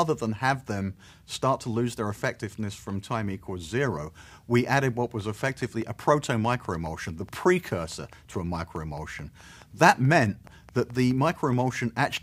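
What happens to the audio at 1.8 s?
Nothing goes wrong at 1.8 s; the audio plays through that moment intact, with no dropout, click or distortion.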